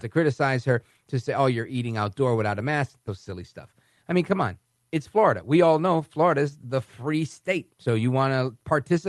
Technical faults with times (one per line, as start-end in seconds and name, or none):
3.07-3.09 skip ahead
3.29-5.40 jitter buffer speed-up